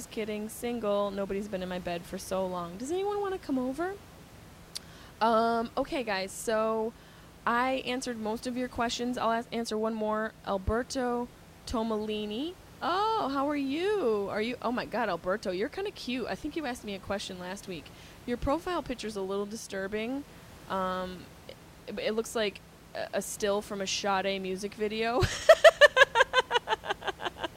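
No technical faults are audible.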